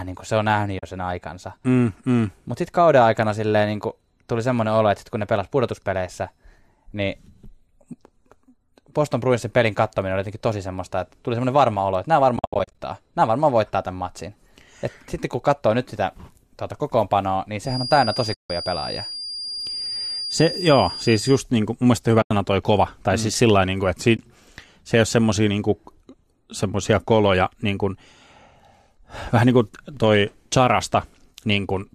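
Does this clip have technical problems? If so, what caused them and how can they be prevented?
Yes. The first is AAC frame loss with muting, at 0.79–0.83 s, 12.37–12.79 s, 18.34–18.50 s, 22.22–22.31 s and 24.17–24.19 s. Lost frames get zeroed, so the sound fades into soft-edged holes rather than clicking. The longest hole lasts 160 ms. The 12.37 s stretch is a patchy run of dropouts across about 420 ms, with no single hole much over 70 ms. The hole lengths fit the roughly 10 ms frames of the low-delay AAC in use. A jitter buffer plus proper concealment, or forward error correction on the link, would fill these in.

From 17.61 to 21.44 s there's a feedback whistle, a thin, steady 4.8 kHz tone sitting roughly 10 dB under the sound and swelling and fading slowly. It's likely a speaker-to-mic loop hovering right at the edge of feedback. Headphones, lower monitor gain or echo cancellation would stop it.

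Two blocks of digital silence land at 23.35 s (0.67 ms) and 29.97 s (1.33 ms). Each is a hard cut to silence and back, heard as a tiny tick. They point to the output buffer not being filled in time. Larger buffers or a lighter processing load should prevent them.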